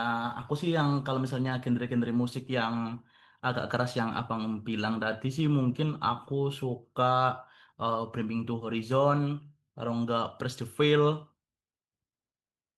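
At 1.41 to 1.51 s, 2.89 to 2.91 s, 4.17 to 4.23 s and 8.11 to 8.13 s, the speech briefly turns rough and grainy without any gap. Each is a lost packet rebuilt from error correction: the following packet carried a low-bitrate duplicate, which the decoder played in place of the missing audio. The 60 ms stretch fits three separate 20 ms packets, the 40 ms one two, and the others one each.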